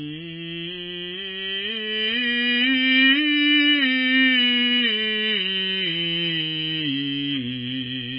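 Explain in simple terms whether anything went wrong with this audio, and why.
Heavy MP3 compression affects the music from start to finish. Nothing above about 5 kHz remains, so the top end sounds dull and muffled, and the sound has a watery, swirling quality. This is likely from saving the file with far too little data. The encoder then discards the treble and drops quieter parts of the sound that flicker on and off moment to moment, producing that unstable, underwater character.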